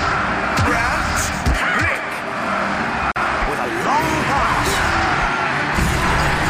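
A short burst of silence cuts into otherwise continuous audio at 3.12 s, lasting about 44 ms until 3.16 s, with softened, codec-smeared edges before the sound resumes exactly where it left off. This is a gap at a join of encoded pieces: the audio was encoded in separate sections and butted together untrimmed, so the encoder's leading delay and the padded final frame of the earlier piece remain as dead air at the seam.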